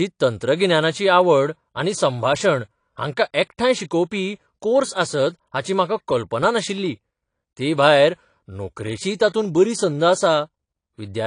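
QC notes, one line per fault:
throughout AAC compression: the speech sounds dull and smeared, with a warbly, fizzy edge on sibilants and nothing above 9.8 kHz, likely from low-bitrate AAC-LC, which fits roughly 32 kbps.
9.15–9.20 s pre-echo: a brief hiss of about 49 ms comes just ahead of the attack between "तेभायर नोकरेचीय" and "तातूंत बरी संद", softening it. The codec spread its block noise forward into the quiet moment before the onset.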